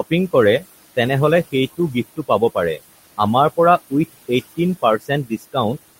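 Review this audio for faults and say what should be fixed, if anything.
Noise suppressor artifacts, throughout: the suppressor cuts the room noise by about 18 dB frame by frame, so the leftover noise sinks and resurfaces around the speech.

Speech cut by the noise suppressor, 1.77 to 2.56 s and 4.99 to 5.56 s: the suppressor mistakes quiet speech for noise and pulls it down by up to about 21 dB and about 13 dB. Brief stretches sound swallowed, roughly a tenth and a third of a second in total.

To prevent both, set the suppressor to a shallower reduction with slower, speech-aware gain changes, since the room noise already sits about 17 dB below the speech.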